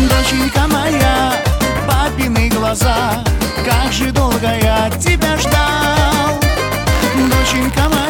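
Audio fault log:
6.92–8.09 s, buffer tearing: a robotic buzz at about 86 Hz rides on the sound to the end. A tiny sliver of each period replays audio roughly 50 ms old, hard-joined on both sides where writer and reader cross, which fits a 512-sample buffer.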